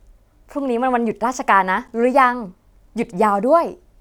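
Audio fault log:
1.88 s, block of digital silence: a brief tick or dip in the speech, too short to register as a gap. For about 8 ms the signal drops out to silence and then resumes, with no fade on either side. A hard dropout like this points to the output buffer not being filled in time, or to a calculation producing invalid values.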